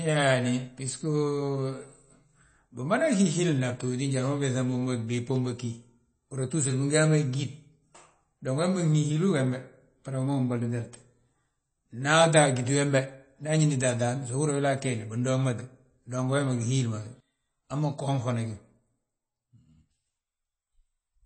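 From start to finish, the speech carries plainly audible codec damage, likely MP3 compression at a low bitrate around 32 kbps. Nothing remains above 8.4 kHz. Weak frequency lines flicker between frames. S sounds turn watery and metallic, and onsets smear.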